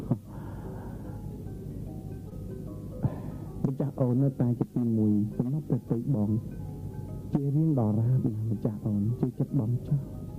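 At 2.29 to 2.33 s there is short concealed packet loss: about 20 ms of audio never arrived, and the decoder extrapolated from the preceding sound. It comes across as a brief smear. A spectrogram shows a short, overly uniform patch with softened edges.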